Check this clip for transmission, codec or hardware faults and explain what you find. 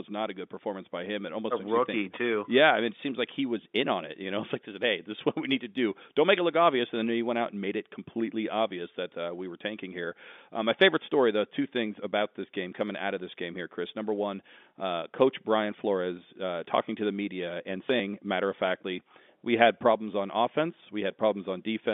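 Nothing amiss turns up in this speech recording, which carries the narrow 200 Hz to 3.6 kHz band of ordinary G.711 telephone coding, with any coding noise no more than faint.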